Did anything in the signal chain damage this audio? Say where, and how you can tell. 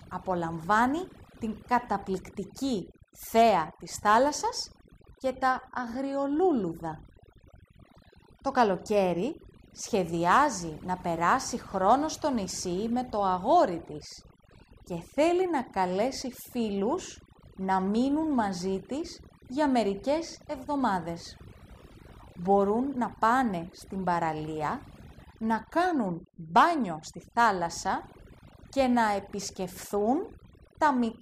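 Yes: overdone noise removal across the whole clip, at the call-processing stage. Suppression set too aggressively gates bands near its noise estimate, leaving twinkling near-silence and taking quiet parts of the speech with it.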